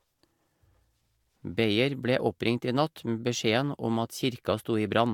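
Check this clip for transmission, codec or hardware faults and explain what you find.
No faults can be heard anywhere in this recording.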